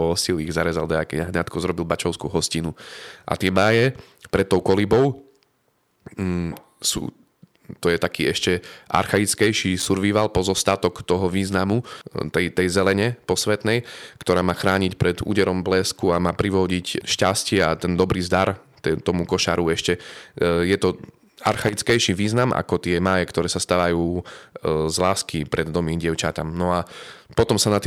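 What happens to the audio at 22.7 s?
Nothing goes wrong at 22.7 s; the speech there plays through intact, with no dropout, click, distortion or other fault.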